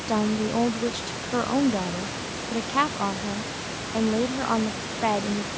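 No faults found in the speech: the call microphone processing leaves nothing above 8 kHz and trims the lowest bass as designed, and the room noise sits about 10 dB below the speech.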